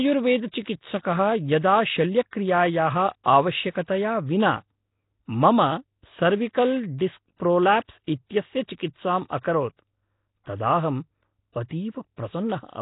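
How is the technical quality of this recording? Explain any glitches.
The technical quality is poor, with heavy codec damage throughout the speech. From start to finish it sounds rough and hissy, with a smeared, underwater character, which points to Nellymoser compression at likely around 16 kbps. Fixed block coding starves weak bands, which get filled with noise. A spectrogram shows nothing above 3.8 kHz, with grainy noise patches where detail should be.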